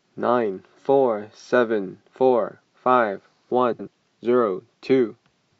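At 3.72 s to 3.88 s the speech has frames out of order. Two adjacent blocks of about 70 ms each, which fits runs of three codec frames apiece, were decoded in swapped order, so the later segment plays before the earlier one. The 0.15 s stretch comes out as a brief garbled flutter. No audio is lost; the timing after the event is unchanged.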